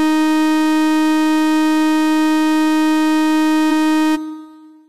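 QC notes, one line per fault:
3.67–3.72 s, compressed frames skipped: the decoder dropped a run of frames, missing or rejected as damaged, which fits roughly ten frames of 46.4 ms each. The sound jumps ahead about half a second.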